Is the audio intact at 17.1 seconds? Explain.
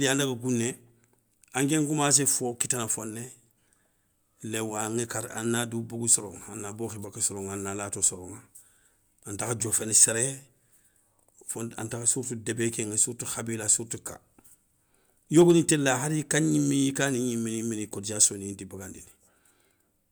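Yes, at 17.1 seconds the speech plays through cleanly, with no dropout, click, distortion or other fault to be heard at that moment.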